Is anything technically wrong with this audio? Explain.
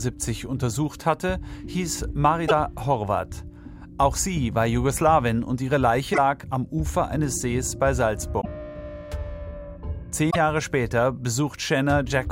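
Yes. Damaged data in a compressed stream occurs at 2.44–2.51, 6.10–6.18, 8.37–8.46 and 10.28–10.36 s. Corrupt bytes there make the decoder misread frames and lose sync. It then hunts for the next frame header. Each spot sounds like a brief chirp, squawk, click or short hole.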